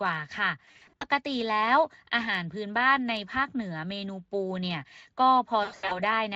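Speech carried over a Speex link, whose light coding damage stays in the background, suffers VoIP packet loss concealed by the speech codec. From 0.65 to 1.06 s and from 5.63 to 5.99 s, the decoder extrapolates over missing packets, so the speech is stretched into a buzzy tone or coloured noise that fades, with the longest run of lost packets, 100 ms, near 5.6 s.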